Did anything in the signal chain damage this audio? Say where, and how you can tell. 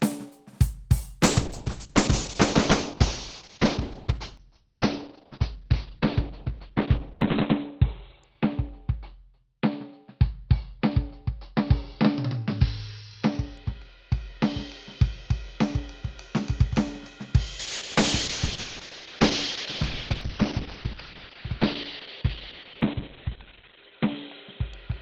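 Yes. A call bitrate drop at the codec stage: from 1.24 s the music falls from 32 to 6 kbps, bandwidth narrowing from 20 kHz to 4 kHz, and again at 17.61 s (8 to 4 kHz). A collapsed bandwidth estimate made Opus code coarsely and cut the top end, leaving a muffled, rough sound.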